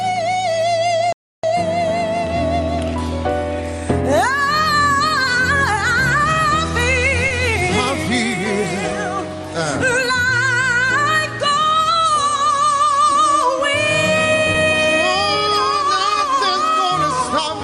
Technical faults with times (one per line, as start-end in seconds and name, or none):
1.12-1.43 playback stall
7.28-7.32 short concealed packet loss
13.12-13.16 short concealed packet loss
14.52-14.56 short concealed packet loss